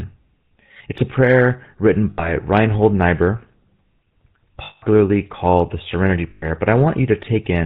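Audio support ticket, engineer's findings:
GSM full-rate codec across the whole call, consistent with 13 kbps coding: pulse-excited vocal-tract model, nothing above 4 kHz, so speech is buzzy, gravelly and band-limited throughout.

Lost GSM frames at 2.10–2.32 s after "a prayer written", 4.64–4.84 s before "called the", and 6.30–6.45 s: decoder repeats the last good frame, giving a rough, metallic ring.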